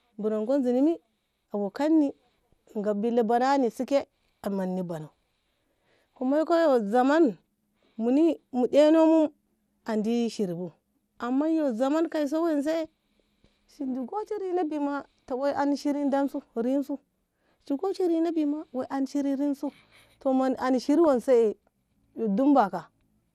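MP2 compression, throughout: the speech sounds dull and gurgling, with upper sub-bands switched off and coarse quantisation, likely from MPEG Layer II coding at roughly 80 kbps.

DAB burbling, 21.04 to 21.07 s: a small share of bit errors slips into a few frames, so single sub-bands get short blips of noise, giving a brief burble.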